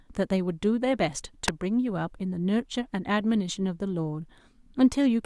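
At 1.48 s a sharp snap, peaking around -10 dBFS, lands on top of the speech. This electrical switching spike is likely a nearby switch or discharge arcing into the line. Unlike a dropout, the speech beneath it never gaps.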